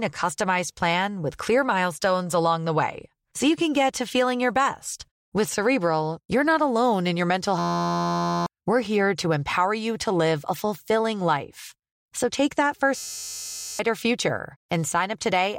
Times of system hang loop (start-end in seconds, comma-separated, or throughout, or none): 7.59-8.46, 12.97-13.79